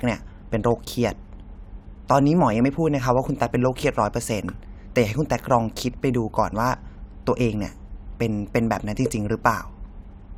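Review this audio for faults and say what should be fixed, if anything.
Nothing here needs fixing; I didn't hear any technical faults in this speech recording, so it can stay as it is.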